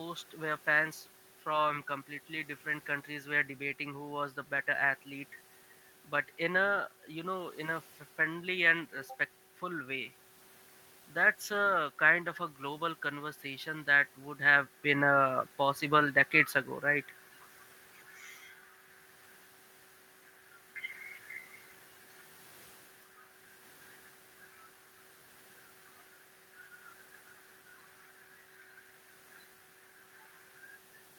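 No technical faults are present.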